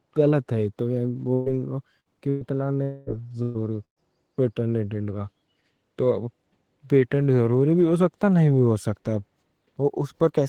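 At 1.33, 2.00, 2.29, 3.43 and 3.84 s the speech briefly turns into a held buzz or fading hiss lasting roughly 50 to 130 ms, with a short stretch of silence at 3.84 s. Speech then resumes slightly further on. This is burst packet loss: the receiver stretched the last sound over missing packets. From 2.83 to 3.10 s a longer smeared, fading tone of about 240 ms replaces the speech, and the sound that was there is skipped. This is likely a long network dropout, concealed the same way.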